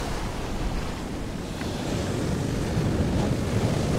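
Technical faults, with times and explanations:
2.13 s to the end: time-stretched section. The audio abruptly plays about 1.61 times faster with pitch unchanged, sounding rushed. This is likely software squeezing the passage to fit a length, dropping short pieces to shorten it while keeping pitch.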